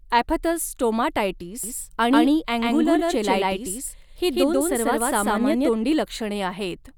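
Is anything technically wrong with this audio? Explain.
Yes. A doubled audio track runs from 1.64 to 5.72 s: a second copy of the speech, about as loud as the original, trails roughly 150 ms behind, likely from a slower duplicate capture path. It sounds dry and abruptly switched, with no room decay.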